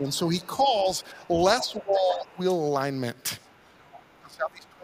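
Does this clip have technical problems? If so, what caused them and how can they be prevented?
Yes. Speech suppressed in double talk: the talker's level dips at 0.0–0.06 s, 1.13–1.22 s, 1.61–2.4 s and 4.22–4.83 s, by a few decibels up to about 25 dB at the end. The likely cause is an echo canceller attenuating the near talker while the far end also speaks. Better double-talk detection with gentler residual suppression prevents this.

The other side's voice leaking through: a second, quieter voice appears at 0.4–0.46 s, 1.59–2.25 s, 3.44–3.52 s and 3.8–4.21 s. It is well below the main talker and most audible around 1.6–2.3 s, where loudspeaker playback likely reaches the microphone uncancelled. A headset or better-converged echo cancellation prevents it.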